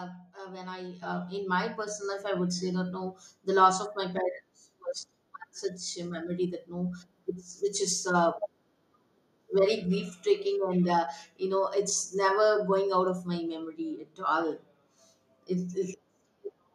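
Microphone volume stepped up at 1.02 s, between "uh when I" and "in my", and again at 2.04 s, between "in my" and "life I would say". Each time the input level of the microphone was raised in a single jump rather than a gradual ramp, first by about 8 dB and then by about 4 dB. The speech and the background noise behind it get louder together at the same instant, so the whole sound lifts in two abrupt steps mid-sentence.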